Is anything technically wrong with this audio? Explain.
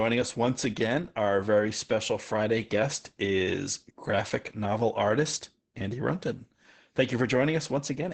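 Yes. Opus voice compression runs through the whole clip and causes heavy codec damage. The speech is cut off above about 8 kHz, so it sounds muffled. It is also hoarse and a little robotic. These traits point to Opus's SILK linear-prediction coder at a low rate, around 10 kbps, which models the vocal tract and codes the excitation coarsely. A plain low-pass filter would only dull the sound, without the rough, synthetic texture. The hoarseness also differs from the swirly, metallic warble of transform codecs.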